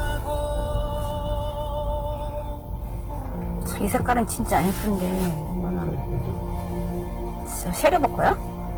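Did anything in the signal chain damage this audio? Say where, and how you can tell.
Yes. Throughout, the sound is grainy and rough, with tonal parts turned noisy but no swirling holes, and content reaches to 20.1 kHz. That points to the codec stage, likely Opus compression in its CELT music mode, which fits a bitrate near 16 kbps. Starved bands are filled with folded copies or noise.

Hard clipping occurs from 3.95 to 4.20 s, with about 4 dB of overdrive, and again from 7.85 to 8.32 s, with about 8 dB. A converter or sample-format stage flattened the peaks, adding high harmonics heard as crackle on peaks, stronger in the later burst.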